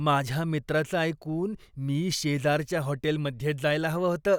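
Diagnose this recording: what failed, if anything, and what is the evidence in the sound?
Nothing in the signal chain audibly failed: the speech holds steady throughout, with no dropouts, discontinuities or level anomalies to point to any stage.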